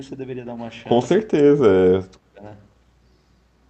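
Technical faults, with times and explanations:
1.22–1.6 s, speech suppressed in double talk: level sinks roughly 25 dB, likely the echo canceller ducking this talker while the far end spoke over it.
1.86–2.43 s, speech suppressed in double talk: a deeper dip of roughly 30 dB for about half a second, likely as the canceller again attenuates near and echo together.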